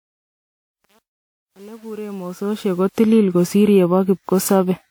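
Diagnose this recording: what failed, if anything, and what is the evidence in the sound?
The codec stage shows generation loss across the whole clip. The speech sounds swirly, smeared and hollow, consonant attacks are blurred, and nothing is present above 20.1 kHz. The likely cause is repeated lossy re-encoding, about seven passes, with a character that fits WMA 1 at 128 kbit/s. Each decode and re-encode quantises again on a shifted frame grid, so the noise builds up beyond what a single encode at that rate would produce.

A gain or sample-format stage shows truncation distortion on a fade. The fade-in runs from 0.0 s to 2.95 s, and its quiet portion is gritty. This is worst from 0.0 to 2.48 s. The fade was computed at a word length that fits 8 bits, with no dither, so the low-level waveform collapses into a few coarse steps.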